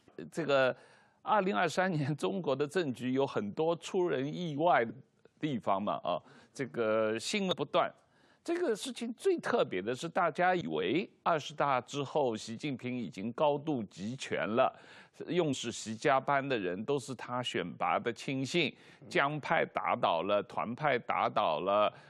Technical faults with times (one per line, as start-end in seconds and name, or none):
4.89-4.91 damaged data in a compressed stream
7.51 damaged data in a compressed stream
10.60 damaged data in a compressed stream
15.52 damaged data in a compressed stream